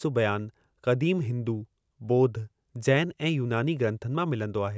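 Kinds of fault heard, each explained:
Nothing stood out on listening to this speech recording.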